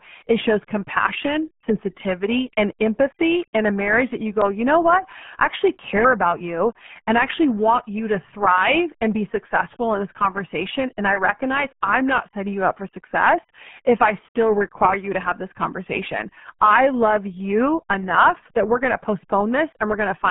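RealAudio 14.4 codec damage runs through the whole recording: heavy coding that fits an 8 kbit/s dial-up-era codec leaves only a narrow band from 150 Hz to 3.4 kHz, with nothing above 3.6 kHz, so the speech sounds muffled, thin and gargly throughout.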